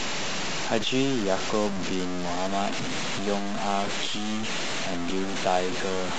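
From the start and through the whole clip, the speech carries a harsh, grainy distortion that rises and falls with the speech and is nearly as loud as it. Quiet syllables break into sputter or drop to silence. This is most likely low bit depth without dither: the samples were truncated to very few levels, which fits about 4 bits, so the error follows the waveform. Unlike steady hiss or broadband noise, it vanishes in pauses rather than sitting under them.

At 2.49 s the quality changes abruptly and stays degraded to the end. The codec artefacts rise on top of the grain. This is an adaptive stream at a lower bitrate. The player switched to a cheaper version when throughput fell, and the sound points to a step from roughly 96 kbit/s AAC down to a low-rate HE-AAC stream near 20 kbit/s. Unlike a dropout or packet loss, there is no gap or stutter at the switch, only a sudden, sustained loss of fidelity.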